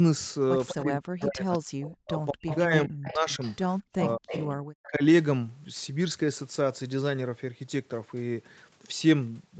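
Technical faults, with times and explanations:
0.68 to 4.88 s, echo leak. A delayed copy of the speech sits under the live talker. It trails by about 264 ms and runs roughly 15 dB below the main level. This is likely a loudspeaker on the far side feeding its own microphone, with the echo canceller there letting part of that pickup through. The leftover then travels back down the call as a late, faint repeat.
0.74 to 5.02 s, speech suppressed in double talk. While both sides talk at once, the loudspeaker-side talker's level drops away in pieces. At the deepest point it falls by around 40 dB, close to silence. The cuts add up to about two seconds inside this span. The likely cause is the echo canceller mistaking live speech for loudspeaker echo. It then turns everything down together, so the wanted talker gets muted along with the echo.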